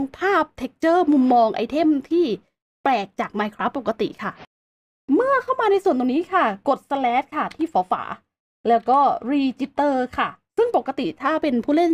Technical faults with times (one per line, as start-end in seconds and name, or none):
none